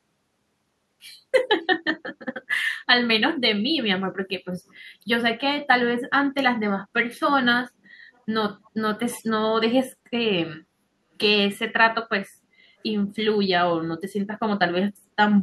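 A speech recording with three short scraps of echo leak: faint, delayed copies of the talker surface at 8.14 to 8.21 s, 8.65 to 8.70 s and 9.16 to 9.25 s. Each trails the original by 341 ms. The first two sit very low under the speech and the third is noticeably stronger. The likely cause is a far-end loudspeaker whose echo canceller let part of its microphone pickup slip back into the call.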